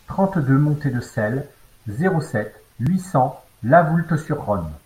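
The recording software most likely failed to collect its samples before the hardware overwrote them, a dropped buffer (overrun), twice in this speech. At 1.42 s and again at 2.87 s, a few milliseconds of audio vanish and the surrounding sound is spliced straight together with no gap of silence. Each loss is heard as a jump where the speech skips slightly ahead.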